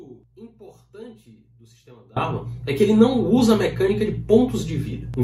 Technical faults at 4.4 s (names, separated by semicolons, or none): none